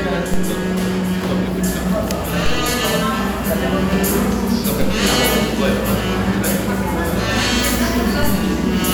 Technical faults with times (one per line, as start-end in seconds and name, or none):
0.34 DC step
2.46 DC step
4.81 DC step
8.23 DC step